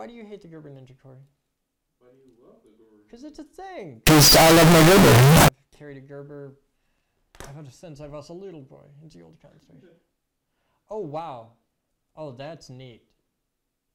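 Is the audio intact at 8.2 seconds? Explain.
Yes, the audio at 8.2 seconds is intact, with no dropout, click, distortion or other fault at that moment.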